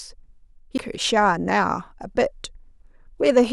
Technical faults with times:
0.78 CD skip

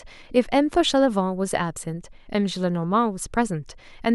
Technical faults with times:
none

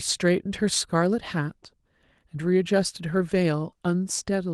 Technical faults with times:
none

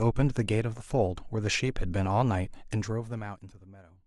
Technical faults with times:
none

